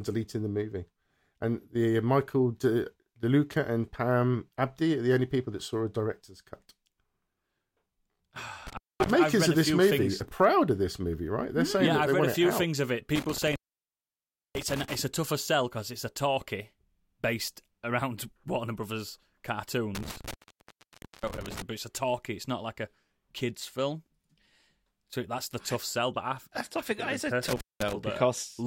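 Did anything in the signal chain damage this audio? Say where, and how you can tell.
Yes. The damage is in the analogue wiring: an intermittent contact. The speech drops out four times, at 8.67 to 9.11 s, 13.15 to 14.95 s, 19.95 to 21.62 s, and 27.48 to 27.93 s. The line stays open for about 0.23, 1.0, 0.9 and 0.2 s in turn. Crackle marks each edge as the connection breaks and remakes. Faint hiss remains in the gaps. A loose plug or cable is losing contact.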